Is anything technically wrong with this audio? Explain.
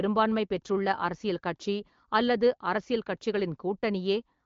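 No, nothing in this speech clip is technically wrong. It carries the band-limited sound of an AMR wideband (HD Voice) call, with nothing above about 7.5 kHz and only light coding texture, which fits a rate around 15.85 kbit/s.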